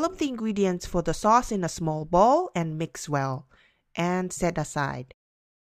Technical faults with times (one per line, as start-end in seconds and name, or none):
none